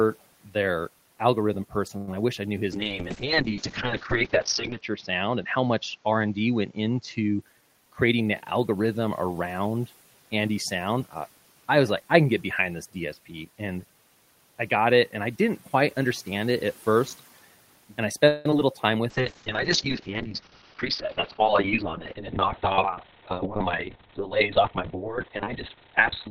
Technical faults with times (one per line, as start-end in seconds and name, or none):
1.97-2.08 call audio freeze
2.11-2.13 short concealed packet loss
2.72-7.47 call bitrate drop
7.29-8.21 jitter buffer speed-up
18.28-18.46 call audio freeze
18.50-18.59 short concealed packet loss
19.10-26.30 call bitrate drop
20.49-21.35 jitter buffer speed-up